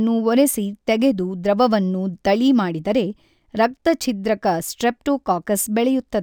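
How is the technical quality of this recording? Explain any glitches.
The recording has one technical fault, and it runs through the whole clip: imaging from linear upsampling. The audio was apparently raised to a higher rate by drawing straight lines between samples. The sound points to a jump from roughly 22 kHz to 44.1 kHz. That crude interpolation leaves the top end dull and lets a mirrored copy of the spectrum leak into the 11 to 22 kHz band, around 25 dB below the speech. You hear it as a faint metallic shimmer riding on the sibilants.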